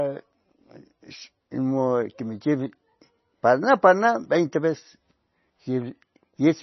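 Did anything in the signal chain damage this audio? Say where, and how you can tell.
Yes, at the codec stage, throughout the speech: nothing survives above 5.9 kHz, and the remaining band sounds watery and swirly, with smeared consonant attacks. That pairing points to MP3 compression as the likely cause, starved of bits at a rate fitting roughly 24 kbps. A plain low-pass filter would dull the top without this shimmering, frame-to-frame flicker.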